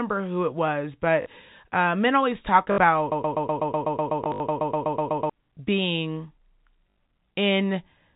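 At 1.22 s, after "who it was", and again at 2.72 s, packet loss with last packet repeated replaces about 40 ms and then 60 ms of sound, with buzzy stutters. From 3.12 to 5.30 s, just after "uh men always talk", a broken-record loop repeats a 124 ms fragment 18 times, likely from a stalled stream. Further repeated-packet gaps occur at 4.24–4.40 s (100 ms lost, runs up to 60 ms) and 6.9 s (60 ms). The narrowband G.711 telephone band is audible throughout.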